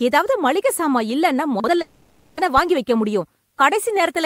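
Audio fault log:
1.60–1.68 s, chunks out of order: a 40 ms chunk of speech plays one chunk late, after the chunk that should follow it. No audio is lost, but the swapped order creates three hard joins, heard as a brief jumbled moment.
1.81–2.39 s, long network dropout: about 560 ms of speech is missing, filled throughout by a continuation of the last sound that turns into a fading buzz or hiss with no silent gap. Speech resumes afterwards without the lost stretch, most likely because no packets arrived during that interval.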